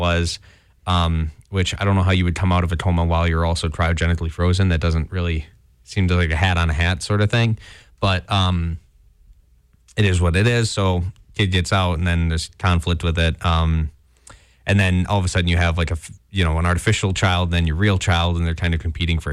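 Two devices in the chain are likely running on unsynchronised clocks that differ by roughly 500 ppm, so every time the drift adds up to a whole sample, one sample is dropped or repeated. That happens about every 40 ms, some hundreds of times, from 0.11 s to 19.32 s. The resulting clock slip clicks come so fast, around 25 a second, that they merge into a soft rattle under the speech, strongest on loud sustained sounds and gone in the pauses.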